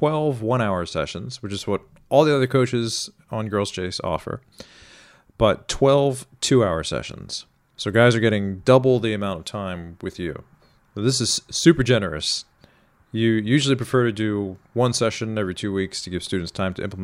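Nothing in this speech recording stands out as a technical fault at any point, so there's nothing to flag.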